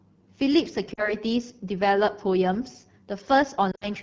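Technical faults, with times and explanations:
Throughout: AMR wideband (HD Voice) codec. The speech has a plainly audible rough, raspy, buzzy grain, with the top end thin and hissy. The rate of 8.85 kbit/s is one of the two lowest AMR-WB modes. There the vocal tract model and pulse excitation get too few bits to shape the voice cleanly. Above 6.4 kHz nothing is coded at all, and the codec fills that band with shaped noise.
0.93 to 1.15 s: lost AMR speech frames. A brief dip and warble interrupts the speech, and the voice comes back weaker and rougher for a moment. About 40 ms of frames were lost here, which fits two 20 ms frames that failed their checks. The decoder bridged the gap by repeating the last good pitch and vocal tract settings at falling gain, then took a moment to recover its state.
3.71 to 3.88 s: lost AMR speech frames. The sound briefly smears and sags toward silence, then returns rough. 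About 80 ms of frames were lost, scattered over roughly 100 ms, with the longest unbroken gap about 60 ms. That run was long enough for the concealment to keep stretching the last good frame while its gain fell away quickly, as wideband decoding does. The following frames came back weak while the decoder resynchronised.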